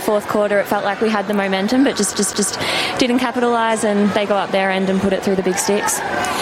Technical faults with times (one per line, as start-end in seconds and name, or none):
2.14-2.53 CD stuck on one turn